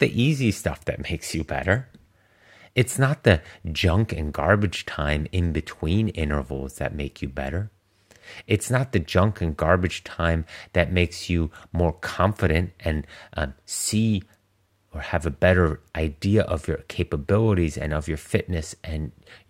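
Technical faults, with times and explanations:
No technical faults can be heard in this speech clip.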